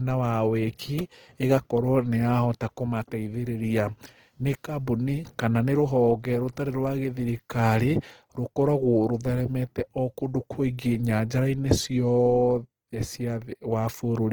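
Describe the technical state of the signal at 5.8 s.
At 5.8 s, as throughout, the speech sounds grainy and rough, with noisy fill across a full band reaching about 20.2 kHz. This is likely Opus compression in CELT mode, consistent with roughly 16 kbps.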